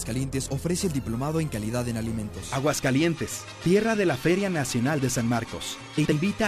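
Right near the end, from 5.97 to 6.13 s, there are frames out of order: two neighbouring 69.7 ms runs swap places, so you get a garbled flutter.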